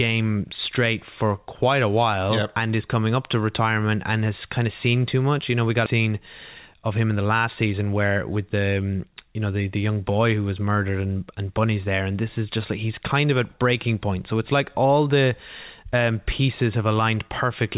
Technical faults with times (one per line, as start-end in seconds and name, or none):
5.86 skip ahead
6.67-7.74 jitter buffer speed-up